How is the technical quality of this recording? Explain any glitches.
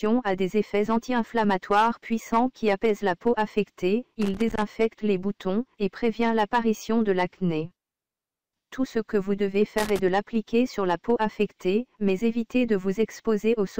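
Two short bursts of loose connector crackle spoil the recording, from 4.22 to 4.63 s and from 9.78 to 9.99 s. A worn or dirty contact is making and breaking as it moves. This chops the signal, and any DC on the line adds pops. The result is an irregular, scratchy crackle.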